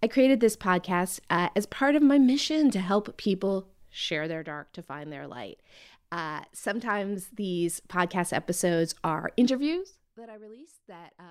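No technical faults are audible.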